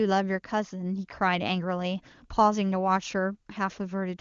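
No technical faults can be heard in this speech, which passes through the AMR wideband (HD Voice) codec with at most faint coding traces, consistent with its highest 23.85 kbit/s mode.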